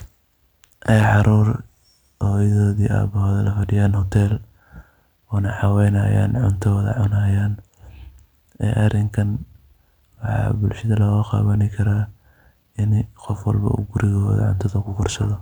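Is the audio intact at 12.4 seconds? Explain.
Yes, the audio is intact at 12.4 seconds, with no fault audible at that point in the speech.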